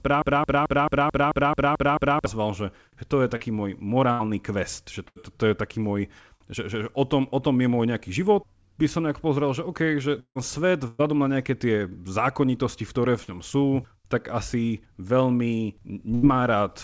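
From the first instant to 2.26 s, a broken-record loop is already under way. One piece about 0.22 s long repeats exactly, back to back, nine times. The stream has likely stalled and kept resending the last fragment it held. The speech that belonged in those seconds is gone.

At 3.36 s comes a short concealed packet loss. About 40 ms never arrived. The receiver stretches the preceding sound over the hole and blends back in. It is heard as a brief smear.

At 4.12 s a burst of packet loss removes about 80 ms. The last sound is held and fades as a buzz or hiss. Speech resumes at "quest že", with the gap's content missing. The same happens at 5.08 s, again about 80 ms.

From 10.20 to 10.38 s there is a long network dropout, likely from no packets arriving. About 160 ms is lost. A fading continuation fills most of it, then roughly 70 ms of silence remains before the audio returns further on.

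At 10.87 s another burst of packet loss takes about 120 ms. The continuation fills the whole gap with no silence.

At 13.23 s a second short concealed loss of about 40 ms falls between "v ktoré" and "ňom sú tak asi". It leaves a quick wobble.

At 16.14 s, right after "sú tak asi veľmi", a final burst removes about 80 ms as a held, fading sound.

Throughout, the call path passes nothing above 8 kHz, which fits a wideband codec such as G.722.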